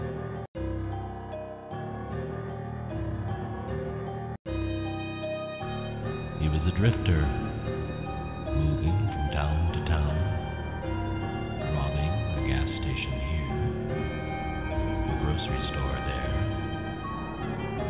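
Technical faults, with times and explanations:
No technical faults can be heard.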